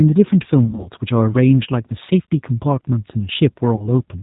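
Throughout the speech, the G.729 codec leaves a rough, slightly synthetic edge. Nothing above 4 kHz survives, and the voice sounds rebuilt from a vocal tract filter and a few pulses, which fits an 8 kbit/s coder. This is different from a simple low-pass filter, which would dull the sound but keep its natural texture. Here the grain and buzz come from the modelling itself.

From 0.65 to 0.89 s comes the first stretch of VoIP packet loss concealed by the speech codec. About 120 ms of audio went missing, scattered over 200 ms, with the longest single run lasting 40 ms. Instead of silent gaps, the decoder carries on from its last pitch and filter. The sound is stretched into a fading buzzy tone or coloured noise, and it stays weak for a moment after the real signal returns. Plain dropouts would give clean holes, not this droning carry-over.

A shorter repeat at 3.75 to 3.89 s, where about 40 ms was lost, brings the same brief concealed stretch and recovery.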